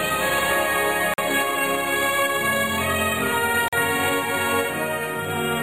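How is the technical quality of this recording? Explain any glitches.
The recording is interrupted twice by a gap between chunks, at 1.14 to 1.18 s and at 3.68 to 3.73 s. Each is a 44 ms hard-edged hole, from silence inserted where 2.5 s chunks join. It shows as flat waveform and blank vertical spectrogram stripes.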